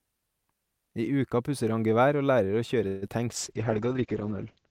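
From 2.87 to 3.04 s the speech stretches into a fading buzzy continuation of the last sound, about 145 ms long. No silence opens up, and afterwards the speech picks up exactly where it left off with nothing skipped. This is a call audio freeze, likely from packets stalling in transit until the jitter buffer ran dry. The receiver extended the last sound to fill the wait, which pushed everything after it about 145 ms later.

Right after, between 3.08 and 3.10 s, there is a brief smear or wobble where a sliver of speech goes missing. This is short concealed packet loss. About 20 ms of audio never reached the decoder in time, and the receiver patched only a few milliseconds of the hole by carrying the previous sound forward. It then blended back into real audio, so the delay tightened slightly.

From 3.30 s to the end the speech turns muffled and rough, losing its top end and taking on a coarse, watery texture. 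This is a call bitrate drop. The bandwidth estimate collapsed and the encoder fell back to very few bits, consistent with a drop from around 64 kbps to 8 kbps. That level holds for roughly a second. Audio bandwidth shrinks from about 20 kHz to about 8 kHz, which removes the crisp high frequencies.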